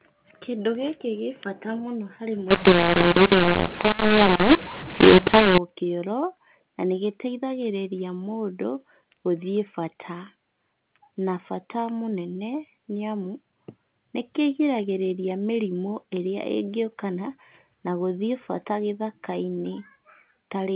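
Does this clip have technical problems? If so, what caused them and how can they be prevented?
Yes. From 2.51 to 5.58 s the speech turns harsh in a mu-law and A-law mix-up: A-law samples decoded as mu-law, scrambling levels. The waveform shows misshapen peaks and noise-filled pauses; the spectrogram shows smeared hiss. Agreeing one G.711 law at both ends prevents it.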